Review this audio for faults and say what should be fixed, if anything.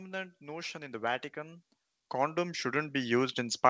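Automatic gain rising runs from 0.32 s to the end of the clip. The gain control judged the incoming speech too quiet and kept raising its gain step by step, so the voice and the background noise floor swell together rather than the speech alone getting louder. The audio also has nothing above 8 kHz, consistent with G.722 wideband coding on the call path. To prevent the rise, set a proper fixed input level at the source so the gain control has no reason to boost.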